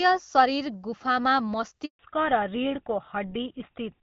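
At 1.85 s the speech cuts out for a handover gap lasting 140 ms, until 1.99 s. The call is being passed from one network link to another, and during the switch no speech frames reach the receiver, so the sound fades within a few tens of milliseconds and then holds true silence. On a waveform this appears as a short flat line. On a spectrogram it is a clean vertical blank band across every frequency.

From 1.99 s to the end, a fallback to narrowband sets in. Before the gap, light AMR wideband (HD Voice) coding carries content up to around 7 kHz, consistent with a rate near 12.65 kbit/s. Afterwards, nothing above 4 kHz survives, pointing to an older narrowband codec such as GSM full rate. The speech turns duller and rougher, with sibilants losing their bite. A spectrogram shows the upper band abruptly emptied, leaving a hard ceiling at 4 kHz for the rest of the clip.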